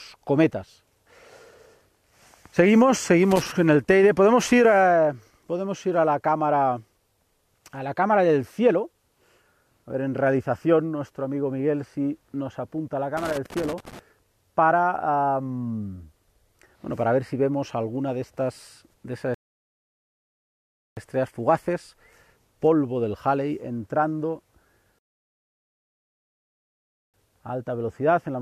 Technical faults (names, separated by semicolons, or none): loose connector crackle; rebuffering stall